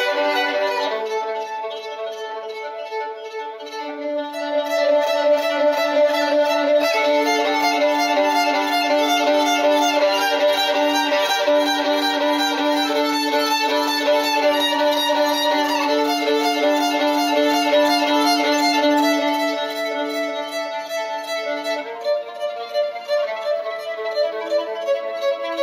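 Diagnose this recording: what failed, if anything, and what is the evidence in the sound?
Nothing in the recording points to a failure at any stage of the chain. There is no audible evidence of a problem to trace, so no diagnosis is needed.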